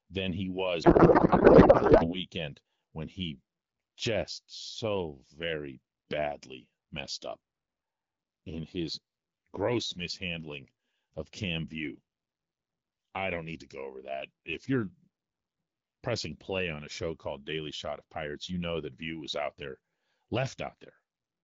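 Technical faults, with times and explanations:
0.83–2.21 s, codec payload misread: just after "than he", the speech turns into garbled noise and warble that barely follows it. Octet-aligned AMR frames are being unpacked as bandwidth-efficient, so every field lands in the wrong place until the framing matches again.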